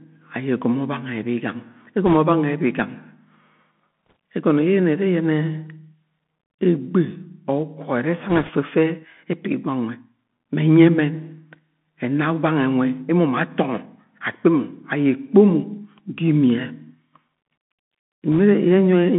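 Throughout, the speech carries the Bluetooth CVSD headset codec: a phone-like band of roughly 150 Hz to 3.5 kHz, which fits CVSD's 64 kbps one-bit delta coding. Its slow-adapting step smears loud, fast detail into scratchy sibilants and a granular hiss, unlike a cleanly filtered narrowband line.

Bit errors on a Bluetooth voice link appear at 2.07–2.16 s, 4.06–4.13 s, 8.29–8.50 s and 18.33–18.38 s. Flipped bits each nudge the waveform only slightly and fade, so there are no sharp clicks or gaps, just brief rushing crackle. It is heaviest at 8.3 s, where errors run around a few percent.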